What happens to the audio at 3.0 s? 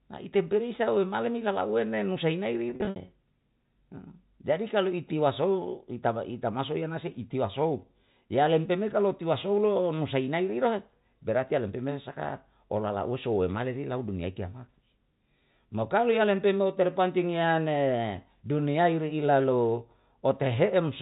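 Packet loss with pitch repetition ends just before 3.0 s, affecting 2.70 to 2.96 s. About 160 ms of audio was lost across those 260 ms, with the longest gap 60 ms, which fits short 10 ms packets. The receiver filled each gap by looping the last pitch period, producing brief buzzy, held tones. On a spectrogram these appear as flat, frozen harmonic stripes, and the waveform shows identical repeating cycles that taper away.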